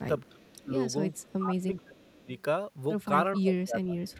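Echo leak at 0.25 to 0.31 s: a faint copy of the speech returns about 436 ms late, roughly 30 dB down, likely because a far-end loudspeaker's echo canceller let residual pickup through. Speech suppressed in double talk follows at 0.29 to 0.71 s, where the speech dips by up to around 25 dB, likely because the canceller, hearing both sides at once, attenuated the talker along with the echo. The same suppression returns from 1.13 to 2.31 s, again up to around 25 dB. Inside that stretch, from 1.77 to 2.0 s, the echo leak recurs with the same 436 ms delay, even fainter at about 35 dB below the speech. A final suppression runs from 3.34 to 4.17 s, with drops of around 20 dB.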